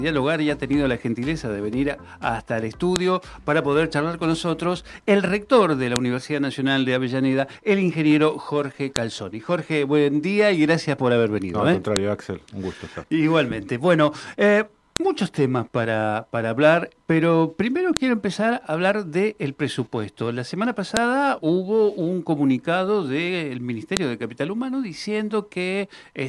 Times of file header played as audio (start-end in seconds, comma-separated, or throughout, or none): 2.96, 5.96, 8.96, 11.96, 14.96, 17.97, 20.97, 23.97